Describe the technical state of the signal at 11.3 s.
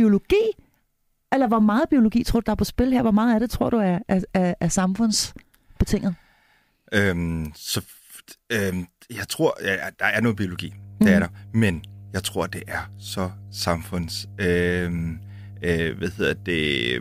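At 11.3 s the speech carries mains hum, present from 10.26 s after "der er" to the end. Power-line coupling adds a steady 50 Hz tone around 20 dB below the speech, seen as a flat horizontal spectrogram line and a regular low ripple in the waveform's pauses.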